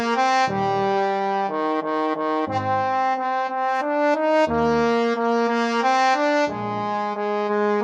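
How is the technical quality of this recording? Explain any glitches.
Nothing here glitches or breaks up at any point, so there's really nothing to flag on the technical side.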